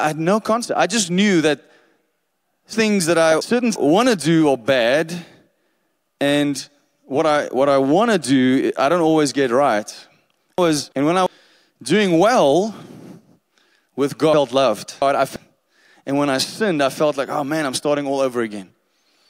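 At 2.73 to 3.76 s, 10.58 to 11.26 s and 14.34 to 15.36 s, chunks play out of order. A 0.34 s block arrives late, jumbling the sound.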